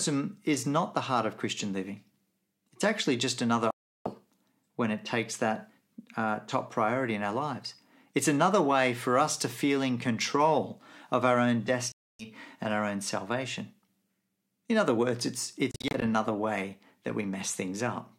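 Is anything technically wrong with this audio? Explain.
Yes. Bluetooth dropouts occur at 3.71–4.09 s after "actually just another", 11.92–12.26 s after "control of our own", and 15.71–16.03 s as short scattered gaps. These are likely late wireless packets being discarded, so the speech cuts to silence and resumes as if it had played on.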